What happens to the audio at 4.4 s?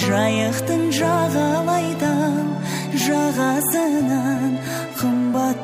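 Nothing goes wrong at 4.4 s; the audio plays through that moment intact, with no dropout, click or other technical fault.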